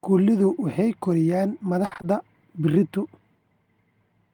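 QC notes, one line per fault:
1.85–2.05 s, repeated packet loss (robotic sound), right after "ay koriyaan". The speech turns choppy. It points to about four dropouts, the longest 60 ms. Each hole is patched by repeating the last sound, 120 ms in all, covering 60% of the stretch.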